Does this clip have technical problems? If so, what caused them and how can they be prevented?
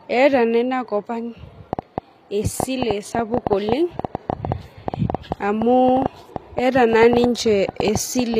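Yes. Throughout the speech there is plainly audible HE-AAC compression damage: the treble is likely rebuilt by spectral band replication from copied lower bands, so sibilants sound gritty and metallic, which fits a low bitrate near 24 kbps. Encoding at a higher bitrate, or with plain AAC, prevents this.

A train of clicks runs from 1.73 s to 8.35 s, around fifty similar pulses at an irregular pace of roughly 6.7 per second, peaking around 15 dB above the signal and ticking through pauses too. This is likely interference or a faulty connection or power supply. Shielding cables, moving away from noisy equipment and checking connections and the power supply prevent it.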